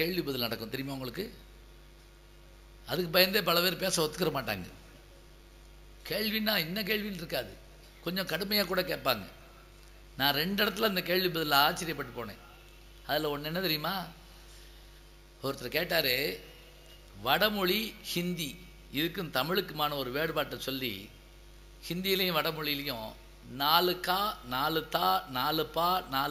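Throughout, imaging from sample-and-hold upsampling: the audio went from 16 kHz to 48 kHz by repeating samples unsmoothed, leaving a mirrored spectrum between 8 and 16 kHz, about 13 dB down, heard as metallic fizz. A spectrogram shows that reflected copy, and the waveform looks stair-stepped.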